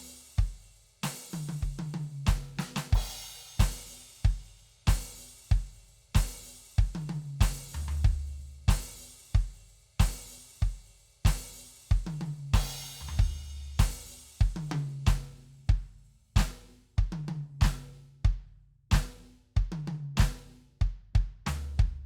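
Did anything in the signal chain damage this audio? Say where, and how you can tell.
No, nothing along the way seems to have hurt this music, and there's nothing in it that points to trouble at any stage of the chain.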